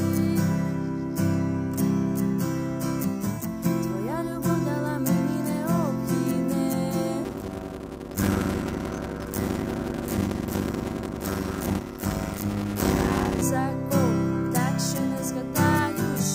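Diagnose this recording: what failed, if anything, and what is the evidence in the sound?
A block size mismatch (padded) at the driver or buffer stage runs from 7.24 to 13.42 s. A 100 Hz buzz appears. The sound slows to 0.533 times normal speed with its timbre unchanged. This fits 256-sample writes into larger reads, with zeros filling each remainder.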